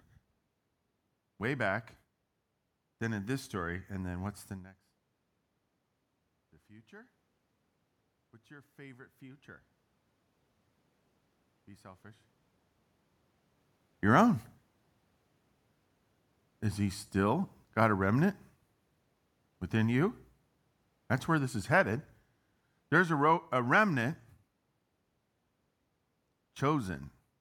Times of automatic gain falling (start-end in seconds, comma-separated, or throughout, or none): 17.13-24.10